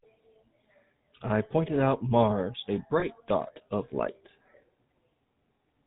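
From the very start the speech has that GSM full-rate codec character, and it's plainly audible. The codec rebuilds the voice from a vocal-tract model fed by a sparse, regularly spaced pulse excitation, and nothing above 4 kHz survives. So everything comes across band-limited and buzzy, with a gravelly roughness in the voiced parts. It sounds like the classic 13 kbps GSM rate.

Then around 3.00 to 3.04 s there's a short glitch that sounds like lost GSM frames, and the length fits a single missing 20 ms frame. The decoder fills the gap by repeating the last good frame's settings. You hear it as a brief rough, metallic ring instead of a clean dropout. Because the gap is so short, it never gets anywhere near fading to silence before normal decoding picks back up.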